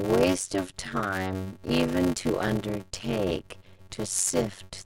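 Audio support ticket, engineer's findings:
Block size mismatch (padded), entire speech clip. Steady buzz near 93.8 Hz, speech running at 0.625x speed but at normal pitch, unlike a sample-rate error. Short writer blocks zero-filled to the reader's size, fitting a 512-sample read. Gap per block produces the buzz.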